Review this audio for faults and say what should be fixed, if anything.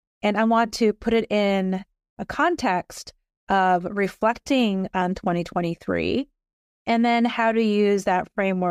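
At 5.02 s the speech jumps ahead, with no gap of silence. That's most likely a dropped buffer (overrun): the recording software didn't collect a block of samples before the interface wrote over it, so a few milliseconds just vanish and the two edges butt together. To prevent it, give the capture a bigger buffer or ease off the system load during recording.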